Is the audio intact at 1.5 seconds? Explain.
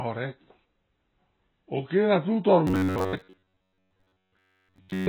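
No, the speech at 1.5 seconds is dull and warbly, with a lowered top end, likely AAC compression at a very low bitrate. Unlike a clean low-pass, its coarse quantisation adds smearing and fizz throughout.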